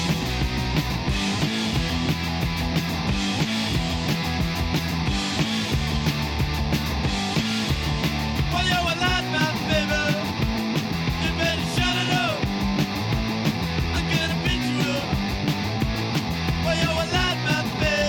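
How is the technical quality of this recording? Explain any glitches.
No audible glitches or faults.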